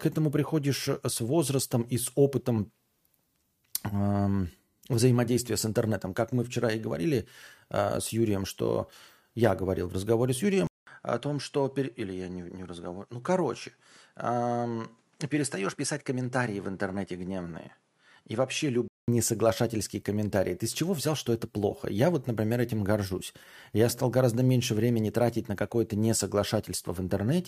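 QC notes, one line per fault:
10.67–19.08 s, input switched to a poorer device: after "говорил в разговоре с" the sound drops out for 200 ms, then returns duller and about 5 dB quieter, with nothing above 11.4 kHz and new background noise roughly 40 dB below it, clearing before "несоглашательские комментарии". The likely cause is a change of microphone. The gap, fresh noise floor and level step set it apart from a codec's bandwidth cut, which keeps the same background.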